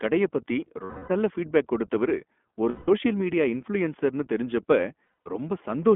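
The whole clip runs through the iLBC codec at 15.2 kbps. The band is cut to roughly 200 Hz to 3.4 kHz. Each 20 ms frame is coded on its own. The speech sounds plainly rough and synthetic throughout.

Lost iLBC frames come next. From 0.84 to 1.12 s, after "கடைய பத்தி", 260 ms goes missing and becomes a held, buzzy vowel. From 2.70 to 2.89 s, after "நல்ல ஃபீட்பேக் கொடுத்தவரு", a 180 ms gap does the same. From 5.06 to 5.28 s, after "மீடியா இன்ஃப்ளூயன்சர்னு தெரிஞ்சப்ப", short losses of up to about 70 ms are scattered. The decoder repeats the last pitch cycle with noise, and the voice is right again almost at once.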